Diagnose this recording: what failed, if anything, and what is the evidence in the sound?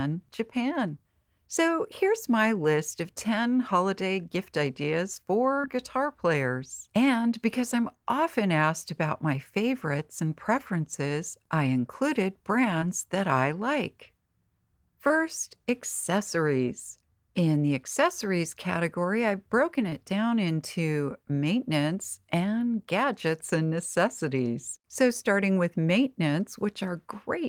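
The network dropped packets, and you can hear short concealed packet loss in four places: 5.61–5.65 s, between "holiday gift ideas" and "guitar players"; 12.79–12.83 s, after "and preferences I included"; 15.07–15.12 s; and 19.90–19.93 s, before "down into maintenance and". Each time about 20 ms of audio arrived too late to decode. The receiver papered over the gap by extending the preceding sound, then crossfaded back into real audio, leaving a brief smear or wobble.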